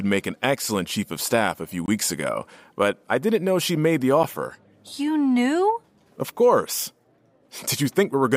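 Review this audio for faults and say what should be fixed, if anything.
Two blocks of digital silence occur, from 1.86 to 1.88 s between "of staff a few" and "ago but I didn't", and at 4.23 s after "know she made the". Samples drop abruptly to silence, leaving a flat waveform line. Giving the audio path enough buffering headroom so output is always filled in time would prevent them.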